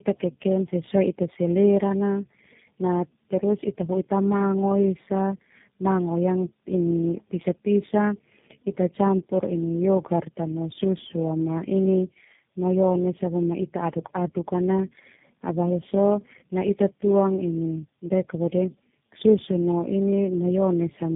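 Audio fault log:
throughout, tandem speech coding: the speech sounds like it went through three low-rate speech coders in a row, most likely G.729A, then GSM full rate, then G.729A again, with plain A-law links between them. Each hop decodes and re-encodes what the last one had already mangled, so the errors pile up. You get that gritty, warbly, muffled quality, worse than any single codec, and nothing above about 3.7 kHz survives.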